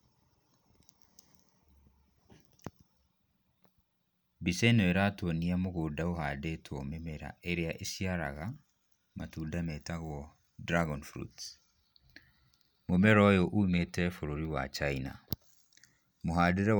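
A speech recording with no technical faults to point to. Nothing in it calls for a timestamp or a cause.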